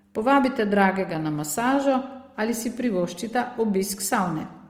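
All the way through, the speech has that grainy, rough texture of Opus compression, likely from music-mode encoding at around 24 kbps, with thin bands noise-filled.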